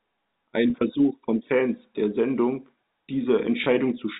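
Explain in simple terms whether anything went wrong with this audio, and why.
Two brief dropouts show packet loss with pitch repetition. At 0.70 to 0.74 s, about 40 ms of speech is missing, and at 3.64 to 3.66 s, about 20 ms. Each time, the receiver repeats the last pitch cycle to fill the gap, so the sound briefly turns into a held, buzzy tone.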